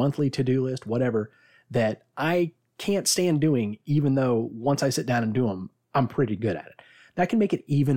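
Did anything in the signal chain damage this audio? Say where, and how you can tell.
No, nothing in the signal chain damaged this speech.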